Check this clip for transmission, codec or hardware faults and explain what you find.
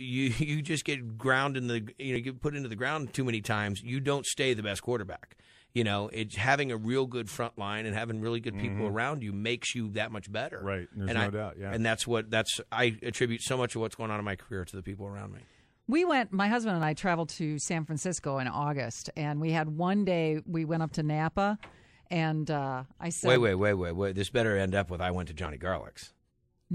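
There are short skips at 2.16, 13.12, 16.83, 23.36 and 25.46 s, each with the sound jumping forward, roughly 10 ms lost (about 20 ms at 16.83). That's likely a dropped buffer (overrun): samples overwritten before being read, with the edges spliced together.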